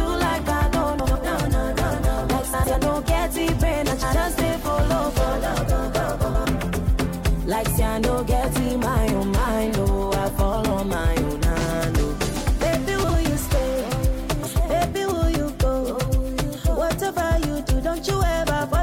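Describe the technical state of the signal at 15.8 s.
At 15.8 s the signal is intact, with no dropout, clipping, glitch or other technical fault to be heard.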